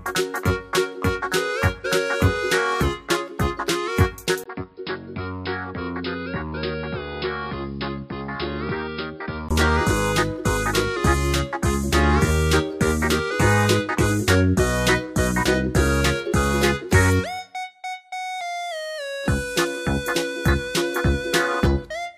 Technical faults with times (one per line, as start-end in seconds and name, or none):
4.44-9.51 input switched to a poorer device